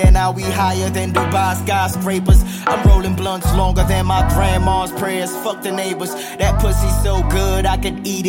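No technical faults are audible.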